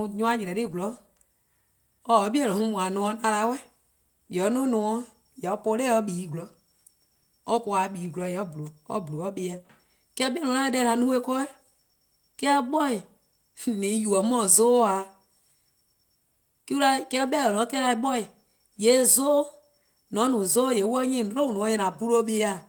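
No faults are audible: the speech carries full-band Opus voice compression, with content reaching about 20.1 kHz and only light coding damage.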